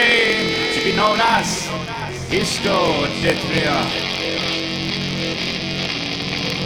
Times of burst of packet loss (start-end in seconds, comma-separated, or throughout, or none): none